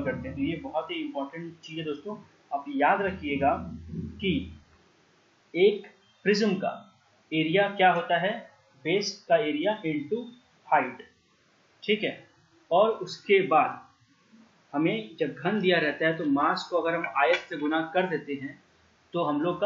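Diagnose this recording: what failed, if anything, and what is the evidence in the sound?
Nothing in the recording points to a failure at any stage of the chain. The sound holds steady from its first moment to its last, with nothing that would mark a broken link between capture and playback.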